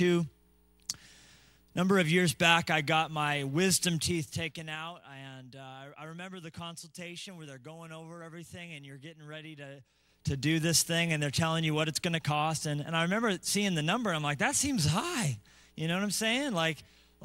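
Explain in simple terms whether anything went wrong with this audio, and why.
The volume control was moved in coarse jumps instead of a smooth glide, which causes zipper noise. From 3.88 to 5.16 s the sound drops in a few audible steps, and from 9.76 to 10.44 s it rises faster, each jump adding a small tick.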